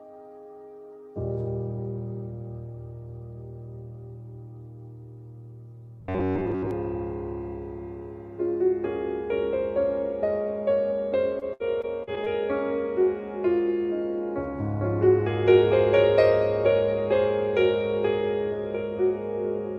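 From 6.01 to 6.71 s the sound collapses into a rigid, metallic buzz pitched at about 93.8 Hz, which fits a segment of roughly 10.7 ms being replayed over and over. This is likely robotic sound from repeated short buffers: new audio reached the output too slowly, so the last short block was looped to fill time while most of the real material, around two thirds or more, was skipped. The contour of the sound survives only loosely beneath the drone.

From 11.39 to 12.28 s, repeated packet loss gives a choppy, robotic texture. About half a dozen short holes open in quick succession, the longest around 64 ms, and each is patched by stretching the preceding sound, for 168 ms of filled audio in total, about 19% of the span. Around 180 ms of real content never arrives, so pieces are audibly missing between the smeared fills.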